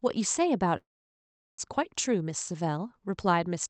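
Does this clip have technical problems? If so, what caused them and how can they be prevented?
Yes. From 0.77 s to 1.60 s the speech breaks off. The last sound is drawn out into a fading buzz, then near-silence, and speech resumes with about 0.6 s of content missing. This is likely a long network dropout: packets stopped arriving, the receiver concealed the gap by extending the final sound until that ran out, and the lost stretch was skipped. Prevention: use a more stable link or forward error correction with redundancy so brief outages don't leave unrecoverable gaps.

From 1.68 s to 3.68 s the speech runs about 8% fast at unchanged pitch and sounds hurried. This is jitter buffer speed-up. The buffer held roughly a fifth of a second more audio than its target. The receiver drained the excess by cutting out short pitch-period segments repeatedly over two seconds. The Opus path at 48 kbps with an 8 kHz bandwidth carries this. 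Prevention: reduce network jitter and packet bunching so the buffer doesn't overfill and need catching up.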